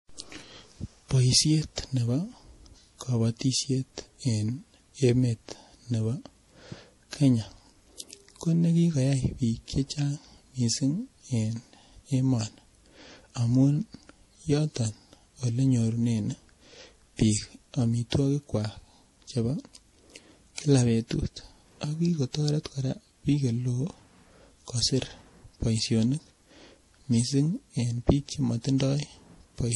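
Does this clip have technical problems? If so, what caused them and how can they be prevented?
Yes. The recording appears to have passed through more than one lossy encoder, most likely transcoding between lossy codecs: an MP3 stage around 48 kbit/s followed by Vorbis around 43 kbit/s. Throughout the speech, nothing is heard above 11.5 kHz, and the smeared, swirly texture of the first encode sits under the second codec's own graininess, because Vorbis wasted bits re-coding those artefacts. To prevent it, encode once from the original uncompressed source.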